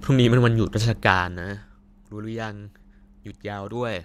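It's a speech clip with zipper noise between 0.86 and 1.72 s. Over that stretch the level comes down by something like 15 dB, but instead of a clean slide it drops in coarse steps, roughly forty a second, with no smoothing between them. Each jump puts a tiny click into the waveform, so you hear a fast ticking or zipping laid over the speech for as long as the level is moving.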